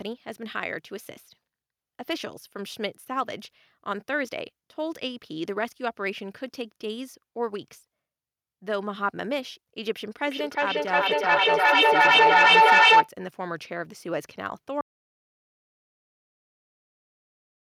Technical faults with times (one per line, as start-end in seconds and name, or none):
10.27-13.14 feedback echo between two devices
14.81-17.73 audio dropout to silence